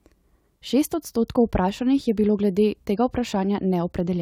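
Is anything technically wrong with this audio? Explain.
No, nothing is technically wrong with this audio.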